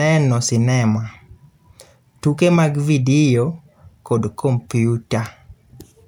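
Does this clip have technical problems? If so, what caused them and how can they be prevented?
No, this clip has no technical problems, so there is no cause to identify and nothing to prevent.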